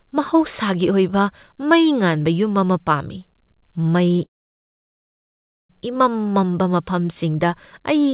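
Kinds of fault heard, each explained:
Short stall from a late packet: At about 4.16 s the speech hangs on its last sound for roughly 23 ms, a brief held tone, then carries on exactly where it left off, so nothing is lost. A packet arrived late, the jitter buffer ran dry, and the receiver stretched what it already had until the packet showed up.
Call audio freeze: From about 4.24 s the speech stops dead, and after a very short fading tail it sits in near silence for about 1.4 s. It resumes at 5.71 s right where it stopped, so nothing is skipped but about 1.45 s of gap is inserted. The likely cause is packets held up in transit, emptying the buffer while the receiver's filler decays away. The band cut at 4 kHz fits a G.711 call path.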